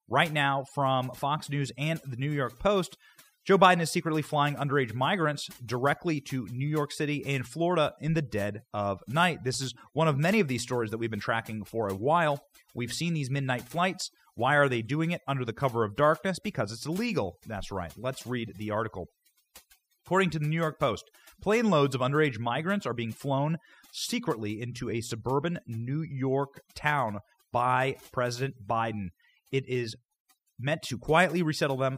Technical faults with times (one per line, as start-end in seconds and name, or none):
0.00-31.98 overdone noise removal